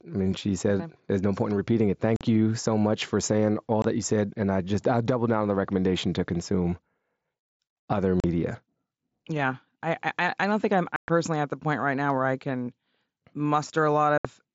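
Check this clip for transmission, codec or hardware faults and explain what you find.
There's one fault here, unconcealed Bluetooth headset packet loss, at 2.16–2.21 s after "point in repeating it", 3.82–3.85 s before "that you said", 8.20–8.24 s, 10.96–11.08 s after "I don't think I'm", and 14.18–14.25 s. Voice packets between headset and phone dropped and nothing filled the gaps, so the speech has hard-edged holes of 22 to 120 ms on top of the light grain of the mSBC wideband link.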